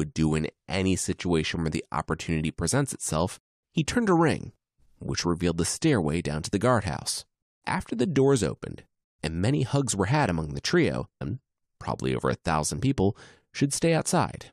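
At 11.2 s the speech jumps ahead with a small blip. Part of the programme is gone. A stream segment skipped is the likely cause.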